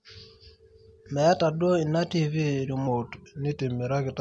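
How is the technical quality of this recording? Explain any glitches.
One glitch: from 2.88 s to the end, a wrong sample rate slows and lowers the speech. Playback at about 0.92 speed, which fits 24 kHz audio played at 22 kHz, drops pitch roughly 1.5 semitones.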